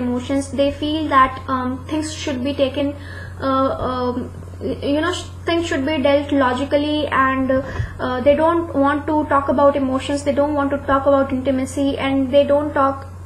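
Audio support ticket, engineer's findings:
Damaged data in a compressed stream at 2.79 s. Short glitch, under 20 ms. Probable component: the encoded file or stream feeding the decoder. Corrupted or missing bytes; the decoder misreads them, loses frame sync and resumes at the next valid header.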